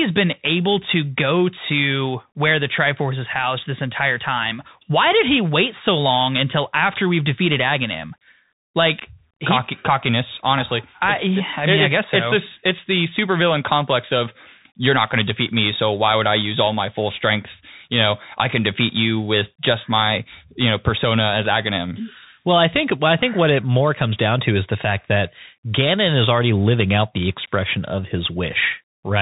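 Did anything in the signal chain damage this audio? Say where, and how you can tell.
Yes, at the codec stage: a Bluetooth CVSD headset codec, throughout. Sound stops at 4 kHz. Scratchy s sounds show one-bit steps lagging, and a granular hiss lies under the speech.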